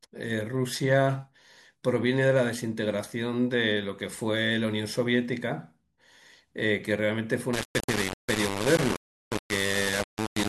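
From 7.53 s to the end at 10.49 s, the speech turns harsh and grainy, with a rough buzz that rises and falls with the voice itself. The distortion is nearly as loud as the speech, and the quietest stretches drop to silence or sputter. This is low bit depth without dither. The grain fits a signal likely rounded to about 3 bits, and with no dither the rounding error follows the waveform instead of becoming a steady hiss.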